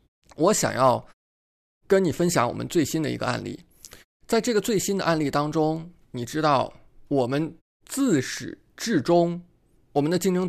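The speech signal shows no technical faults; the background falls to silence in the pauses between phrases and comes back in time for each next sound, with only very quiet sound lost.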